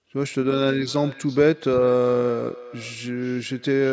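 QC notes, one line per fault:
0.51–3.92 s, feedback echo between two devices: the speech returns as a delayed copy roughly every 0.4 s, peaking at about 19 dB below the direct speech and sounding thinner than it. Two devices on the same call sit within earshot, so one microphone picks up the other's loudspeaker playing its own transmitted signal. Each echo canceller removes only what its own device plays, so the loop survives and re-injects the speech at a fixed interval. The call microphone processing's band limit of 8 kHz applies to the echoes too.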